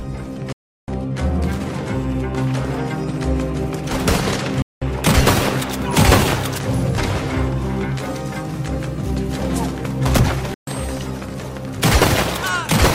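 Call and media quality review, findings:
Sound cuts abruptly to silence with a near-instant fade of about 3 ms, then resumes: 0.52–0.88 s, 4.62–4.82 s, 10.54–10.68 s. Digital broadcast dropout: receiver muting on lost or checksum-failed frames, with gap lengths fitting whole 32 ms frames. Programme audio in the gaps is lost.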